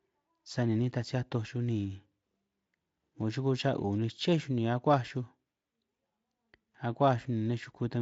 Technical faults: none

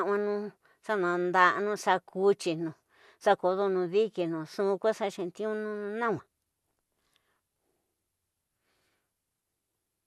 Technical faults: none

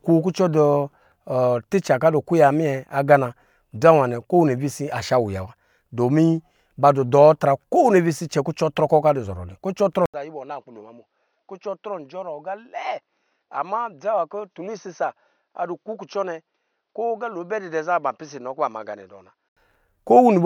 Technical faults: input switched to a poorer device

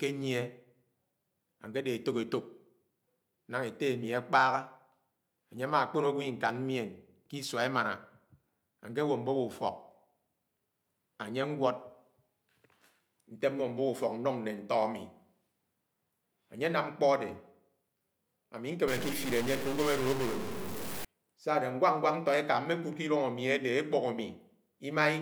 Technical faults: stuck bit

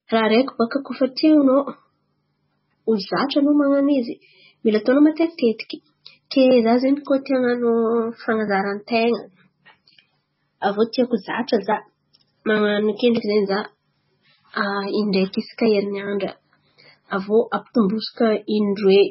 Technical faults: MP3 compression

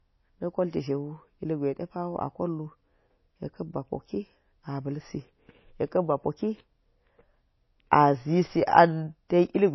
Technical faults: low-bitrate audio saved at a high bitrate

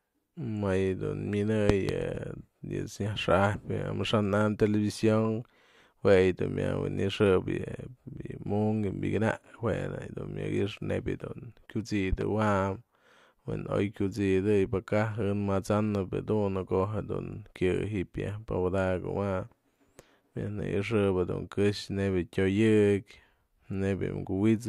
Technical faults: loud pop

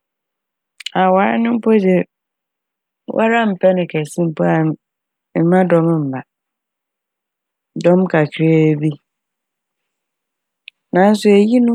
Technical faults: crude rate conversion

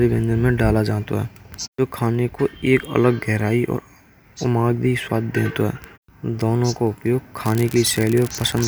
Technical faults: unreliable data bit

